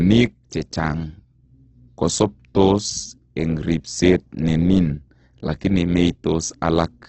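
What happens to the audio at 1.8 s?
At 1.8 s the speech sounds grainy and rough, with a noisy texture and nothing above about 8.2 kHz, so it comes across dull and band-limited. This runs through the whole clip, not just that moment. The likely cause is heavy Opus compression: at a bitrate that fits roughly 12 kbps, the music-style coder keeps each band's energy but fills starved bands with folded or noise content, producing grain rather than swirl.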